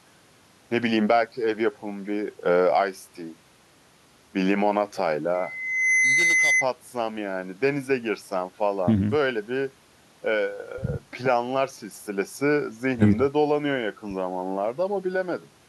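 At 5.34 s a loudspeaker feedback squeal begins in the speech. A single tone near 2 kHz rises out of the sound and swells over about three-quarters of a second. It peaks at roughly 5 dB above the speech and holds until 6.67 s, then stops. The microphone was picking up the loudspeaker it fed. At 2 kHz the loop gain passed one, so that tone kept feeding itself and grew into a piercing whistle.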